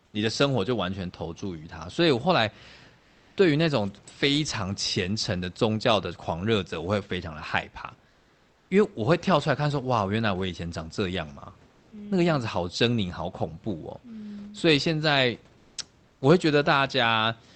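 Comfort noise replaces the real background in six speech pauses: 0.05 to 0.13 s, 2.99 to 3.37 s, 8.09 to 8.69 s, 11.71 to 11.91 s, 15.57 to 15.77 s and 16.07 to 16.21 s. The room sound gives way to a steady, featureless hiss. Its level shifts from the real background, by about 6 dB quieter at the first gap and about 2 dB louder at the second. The likely cause is Opus discontinuous transmission, with the receiver synthesising the fill.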